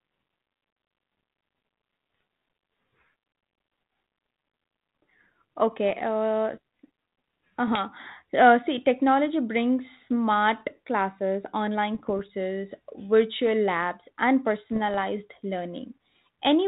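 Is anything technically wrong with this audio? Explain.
Yes. The speech carries bit errors on an ADPCM link, heard as six short bursts: 2.14 to 2.22 s, 5.88 to 5.93 s, 7.67 to 7.81 s, 9.96 to 10.0 s just after "see technology brings", 11.95 to 12.19 s, and 14.72 to 14.98 s. The last two run longest. Flipped bits corrupt the difference codes. They also knock the decoder's step size and predictor off track, so each error rings on briefly. The result is pops, rough grainy bursts and quick level jumps. The link itself sounds like 32 kbit/s G.726, band-limited below 4 kHz.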